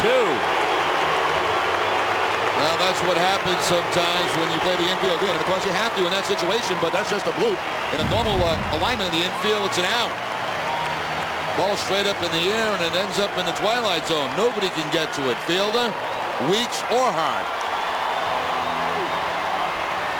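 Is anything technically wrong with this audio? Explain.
Yes, there is one fault. A time-stretched section runs from 4.54 to 9.14 s, where the audio suddenly plays about 1.54 times faster while its pitch stays where it was. The likely cause is software squeezing that stretch to fit a shorter length, keeping the pitch by dropping short slices of the waveform. As a result, this passage sounds rushed before the pace snaps back after 9.14 s.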